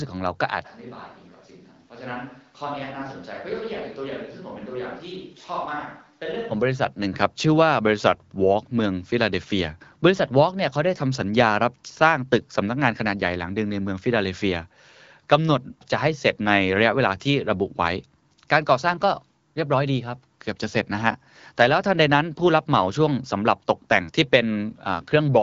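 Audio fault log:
0.67 to 6.50 s, switch to a distant microphone: the speech turns suddenly roomy and hollow, loses its low end, drops by about 10 dB, and carries background room noise sitting only about 30 dB below the speech, then snaps back to the close, full sound at 6.50 s. The likely cause is that the close microphone's signal dropped out and a microphone further away, such as a camera's, took over for this span.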